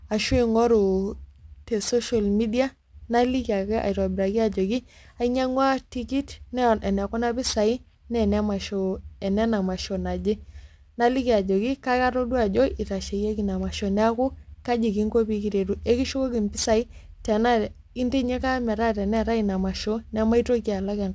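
From start to finish the speech carries aliasing: it was resampled down, fitting a 16 kHz rate, without a low-pass first, so energy above 8 kHz folds back below it, roughly 20 dB under the speech, making sibilants gritty and metallic. A spectrogram shows dense energy running hard up to 8 kHz.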